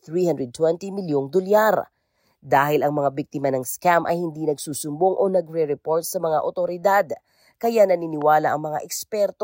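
At 8.22 to 8.24 s, a single loud pop rises a few decibels above the speech, likely a voltage spike from a plug, switch or static discharge.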